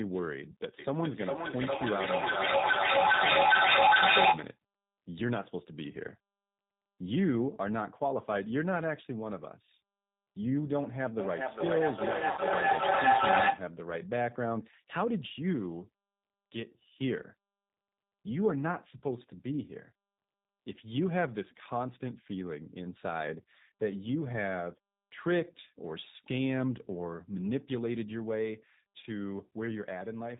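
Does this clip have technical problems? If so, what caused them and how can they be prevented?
Yes. The whole recording went through the G.729 codec (the G.729A variant), and what can be heard fits its 8 kbit/s rate. This codec does not store the waveform. It models the speech as a vocal tract filter, a pitch predictor and a sparse set of pulses in each 10 ms frame, and it cuts off everything above 4 kHz. The damage is plainly audible: the speech sounds dull and band-limited, with a slightly rough, synthetic edge. Encoding at a higher rate or with a wideband codec such as G.722 or Opus would prevent this.

VoIP packet loss, concealed by the speech codec, happened twice. The first gap runs from 12.31 to 12.40 s and covers about 60 ms of missing audio, which fits three consecutive 20 ms packets. The second runs from 29.01 to 29.05 s and covers about 20 ms, which fits a single packet. During each gap the decoder rebuilt the sound from its last pitch and filter while lowering the gain, so the speech there is stretched into a brief buzzy tone or coloured noise that fades. 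Because every frame builds on the one before, the sound stays weak or distorted for tens of milliseconds or more after real audio returns. A more reliable network path, an adequate jitter buffer, or forward error correction would prevent these dropouts.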